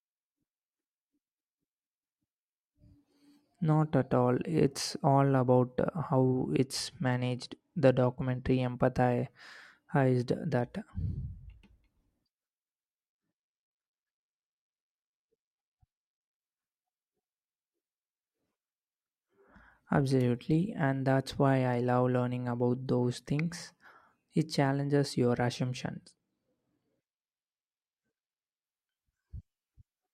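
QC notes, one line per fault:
6.62–8.71 s, 13.11–16.39 s and 25.84–28.64 s: Bluetooth SBC bit pool drop. The speech turns dull and gritty, then clears. The encoder starved the top sub-bands and coarsened the rest, which fits a bit pool falling from 31 to about 15, near 105 kbps.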